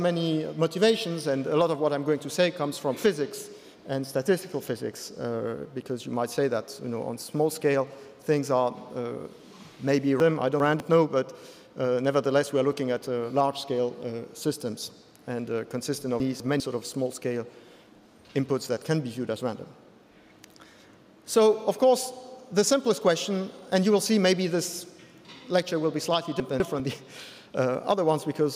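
Chunks out of order at 10.2–10.8 s, 16.2–16.6 s and 26.4–26.8 s: a 200 ms block plays two, then one, then one block late, giving a jumbled moment with hard joins.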